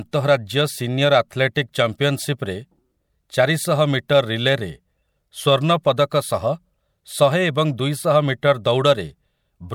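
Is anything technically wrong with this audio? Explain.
Yes. There is pre-echo at 4.08 s and again at 8.64 s in this speech. In each case a short hiss spreads about 11 ms ahead of a sharp onset, so the attack sounds softened and smeared. A transform codec has spread quantisation noise, sized for the loud onset, across its whole block, including the quiet stretch just before it. On a spectrogram this shows as a thin broadband haze leading each onset. On the waveform, low-level fuzz appears before the transient's edge.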